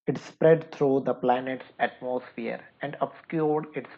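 At 1.36 s the speech abruptly turns duller, losing everything above 4.6 kHz, with no gap or level jump. A faint new background noise arrives too, so it's likely an input switched to a poorer device rather than mere filtering.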